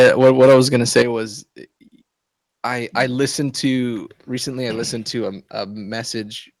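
From 0 to 1.02 s, microphone overload, likely from an input volume set far too high, drives peaks about 9 dB past the converter's limit. Around a tenth of the speech is flattened into harsh crackle. At 1.02 s, the microphone volume is stepped down, likely by the call software cutting input gain about 9 dB at once. Speech and background drop abruptly together.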